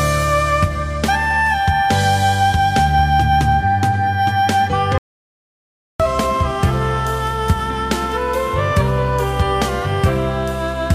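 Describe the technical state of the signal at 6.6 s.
At 6.6 s the signal is intact, with no audible technical fault at that point.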